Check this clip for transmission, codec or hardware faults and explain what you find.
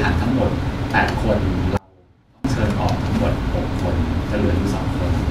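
One fault is present: an audio dropout to a faint residue. From 1.77 to 2.45 s, about 0.67 s, the speech abruptly collapses to a faint leak roughly 30 dB down, then snaps back. This likely comes from a brief signal loss upstream while the path after the break stayed live.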